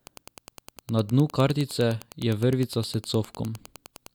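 Wi-Fi interference ticks steadily beneath the speech throughout, every 102.4 ms, well below the voice: rectified beacon pulses, seen as evenly spaced thin vertical lines on a spectrogram.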